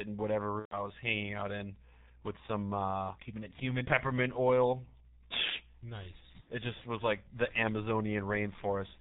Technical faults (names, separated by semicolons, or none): G.723.1 codec; VoIP packet loss concealed by the speech codec